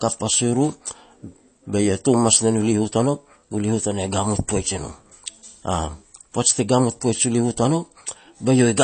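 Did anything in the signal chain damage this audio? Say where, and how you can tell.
Yes, at the codec stage: the speech carries likely MP3 compression throughout, with swirly, watery sibilants and smeared onsets. A spectrogram shows a hard ceiling near 8.3 kHz and flickering holes where weak bands drop out frame to frame, which fits a low bitrate around 32 kbps.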